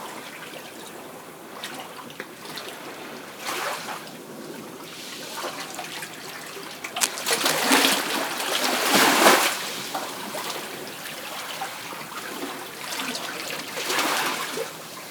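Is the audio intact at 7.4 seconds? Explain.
No. Cable scratch noise runs from 6.85 to 8.18 s, covering 7.4 s. A worn cable or connector was likely being moved, its contact resistance jumping rapidly and adding dense, uneven bursts of scratchy rustling, only slightly quieter than the audio itself.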